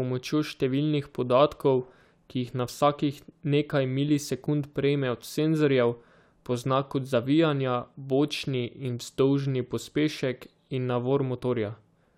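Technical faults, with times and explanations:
No technical faults are audible anywhere in this speech recording.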